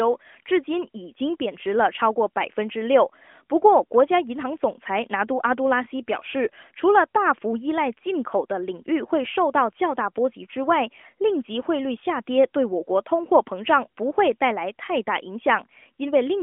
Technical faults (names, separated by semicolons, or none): none